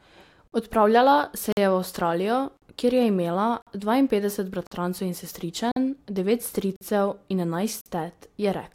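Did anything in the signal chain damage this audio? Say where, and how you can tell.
Yes: gaps between chunks at 0.48, 1.52, 2.57, 3.62, 4.67, 5.72, 6.76 and 7.81 s. Each is a hard-edged silent hole of about 48 ms, recurring every 1.05 s. This points to 1.0 s chunks joined with silence during storage or playback, which interrupts the speech without losing any of it.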